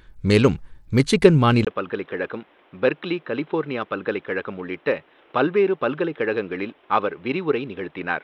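From the start the speech has a gritty, grainy edge, with treble that thins and flickers rather than staying put. That's likely Bluetooth SBC compression, and the amount of damage points to a fairly starved link, something like 96 kbps.

At 1.65 s there's a 20 ms dropout, then the sound turns dull and boxy with nothing above 4 kHz. It's around 10 dB quieter, with a new noise floor a good way under it. That looks like the input switched to a poorer device, likely a headset's call mic.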